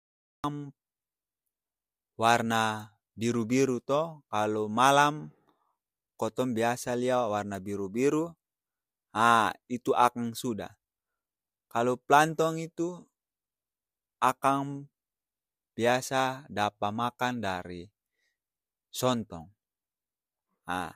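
Cut-off start, 0.00 to 0.44 s: the clip holds digital silence for its first 0.44 s, then the speech begins abruptly in the middle of a sound. Capture started late, so there is no natural onset or attack, only a hard entry.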